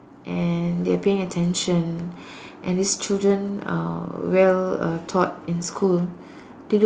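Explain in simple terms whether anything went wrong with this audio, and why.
Yes, one thing went wrong: automatic gain rising. Between 0.26 and 1.04 s, the automatic gain control judged the input too quiet and turned its volume up. The speech and background noise swell louder together over that stretch instead of staying steady.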